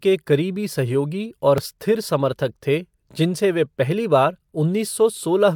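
A speech recording with a single short skip between 1.58 and 1.60 s, where about 20 ms of the sound goes missing and the waveform jumps abruptly. This is an overlap between stream segments: two adjacent segments claimed the same stretch of time, and the player trimmed that overlap even though the audio was not actually duplicated. The result is a small gap with a hard splice at the join.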